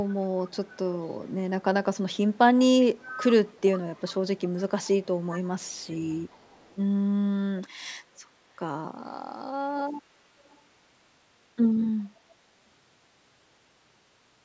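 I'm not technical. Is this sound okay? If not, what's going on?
No. There is an echo leak at 0.0 to 1.62 s, 2.11 to 3.61 s, 3.95 to 6.77 s, 10.39 to 10.61 s and 12.0 to 12.05 s. A faint copy of the speech trails about 0.39 s behind it. It is clearest between 2.11 and 3.61 s and very quiet in the last two bursts. The likely cause is that someone on the call was using a loudspeaker, and their echo canceller didn't fully remove the sound their microphone picked up, so some of it was sent back.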